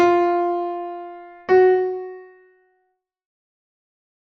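There are no technical faults to describe at any point in the audio, and the smooth fade-out that begins around 1.5 s and runs to the end is ordinary editing.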